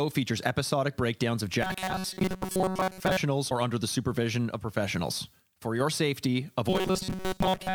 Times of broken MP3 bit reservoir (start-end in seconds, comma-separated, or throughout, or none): 3.49-3.52